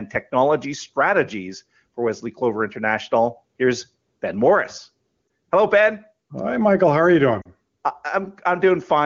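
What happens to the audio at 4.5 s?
Gain pumping runs through the whole clip, so at 4.5 s the gain swells between loud sounds and ducks by about 10 dB under each one, likely from excessive gain with a fast limiter clamping every peak. The waveform looks flattened and squashed, and the level on the spectrogram rises and falls with each loud sound.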